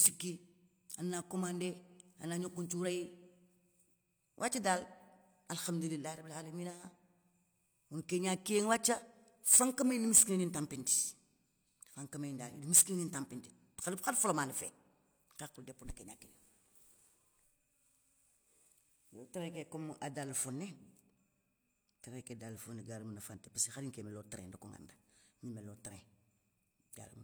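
No technical faults can be heard anywhere in this speech recording. There is nothing in the audio that needs to be placed on a timeline or explained.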